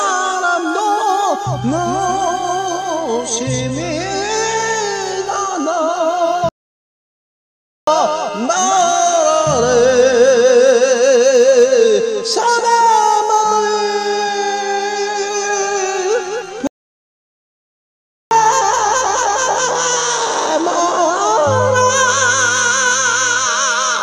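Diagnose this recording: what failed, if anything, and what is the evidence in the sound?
Playback stage: the player most likely ran dry of buffered data or had its output thread blocked, producing two playback stalls. The sound cuts to silence in mid-flow from 6.49 to 7.87 s (about 1.4 s) and from 16.67 to 18.31 s (about 1.6 s), then resumes.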